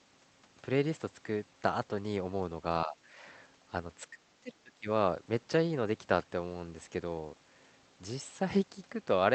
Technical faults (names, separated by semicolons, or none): speech suppressed in double talk